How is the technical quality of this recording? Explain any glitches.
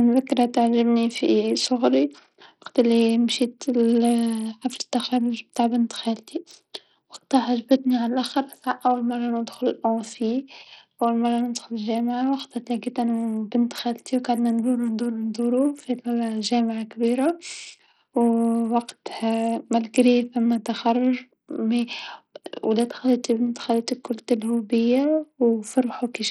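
The recording is speech marred by heavy codec damage from start to finish, most likely Bluetooth SBC compression. Throughout the clip the upper treble thins out and flickers in and out, and a gritty, rough noise clings to the sound, with some aliased hash in the highs. SBC splits the signal into a few wide sub-bands and hands out bits with no hearing model; starved of bits, the weak top bands drop out and the rest are coarsely quantised, which fits a low bitrate around 64 kbps. A simple low-pass would remove the treble cleanly and steadily, whereas here it flickers and comes with grit.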